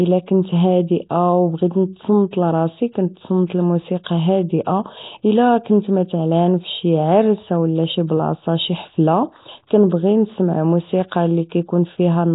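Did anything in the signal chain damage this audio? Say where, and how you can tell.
Yes. The speech sounds hissy and underwater throughout, with nothing above 3.8 kHz. This is likely heavy Nellymoser compression starving weak bands of bits and filling them with noise.

From 4.04 to 4.06 s a brief hiss blurs into a sharp attack. This is codec pre-echo: one block's quantisation noise spreads into the quiet 25 ms before the onset.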